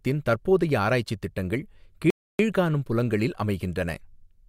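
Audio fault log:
2.10 to 2.39 s, rebuffering stall: the player drained its store of downloaded audio and had nothing left to play, so it halted and waited for the next portion of the stream to arrive. The speech drops abruptly into silence for about 0.29 s, then picks up at exactly the point where it broke off. No part of the speech is skipped or repeated; the gap simply adds 0.29 s to the clip's running time.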